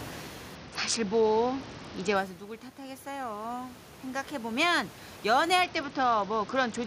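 Speech with room noise sitting about 17 dB below the voice. It suffers two Bluetooth SBC bit pool drops, from 0.55 to 2.16 s and again from 5.64 s to the end. In both stretches the treble goes dull and a gritty noise rises. That fits the SBC encoder falling from a bit pool of 28 to 8, around 72 kbps, so the upper sub-bands get few or no bits and the rest are coarsely quantised. On a spectrogram the top bands thin out or go blank and the remaining energy turns grainy, with a clear edge at each start.

Around 2.0 s the talker moves away and the voice level falls by about 11 dB. From 2.76 to 5.53 s an automatic gain rise follows: the gain control lifts its gain gradually by about 9 dB, so voice and room noise swell together and only part of the lost level comes back. The waveform envelope shows a slow ramp rather than a step, and the noise floor rises along with the speech.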